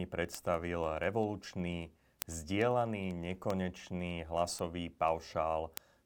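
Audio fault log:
0.15–5.97 s, word clock ticks: Sharp ticks of uneven strength recur about every tenth of a second, around seventy in all, running under the speech for nearly the whole clip. The receiving device runs on its own clock, which seems to be off from the sender's by something like a couple of hundred parts per million. Each time the two clocks slip past each other, a few samples are misread and a single sample is dropped or repeated. That steady rhythm, unrelated to what is being said, is what separates this from random dropouts or crackle.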